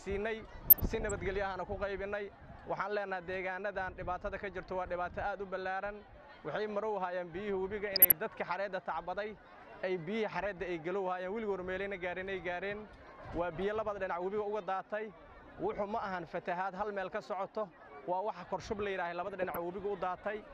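Short blips of noise break over the sound at 0.70–1.26 s, 7.79–8.12 s, 13.09–13.36 s and 19.24–19.57 s. This is DAB burbling: weak reception let stray bit errors past error correction into the MP2 data, so wrong samples put short blips of noise in single sub-bands.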